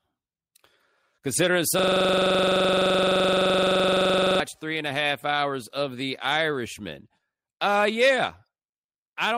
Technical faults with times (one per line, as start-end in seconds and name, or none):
1.79-4.40 system hang loop